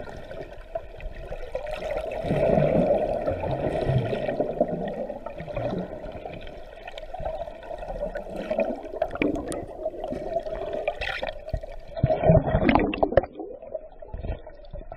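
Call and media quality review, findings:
Adaptive stream at a lower bitrate, 11.94 s to end: abrupt treble loss above 5.5 kHz, swirly codec artefacts, no gap, unlike a dropout. Sound suggests a switch from about 128 to about 17 kbit/s.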